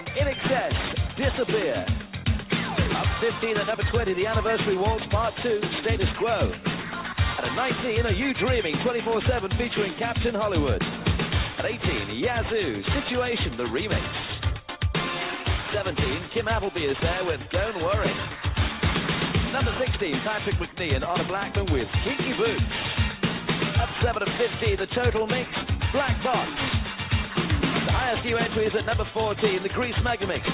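Aliasing runs through the whole clip. The audio was resampled downward without an anti-aliasing filter, and the fold point sits at 4 kHz, which fits a conversion from 44.1 kHz to 8 kHz. Content above 4 kHz was not removed but mirrored back below it, landing at unrelated frequencies roughly 10 dB under the signal. It sounds gritty and metallic, with energy pressing right up to the 4 kHz edge. A plain low-pass would instead sound dull and leave that band empty.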